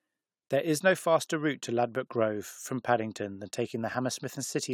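No technical faults can be heard anywhere in this speech recording. There is nothing to mark at any point in time.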